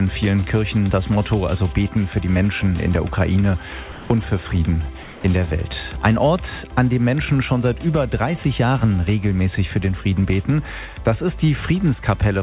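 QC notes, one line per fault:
3.92–4.10 s and 5.03–5.24 s, sound dropped by the voice detector: the sound gives way to steady, flat noise for 0.18 s and then 0.21 s before returning. The likely cause is a sender detector mistaking quiet sound for background, with comfort noise filling the gaps.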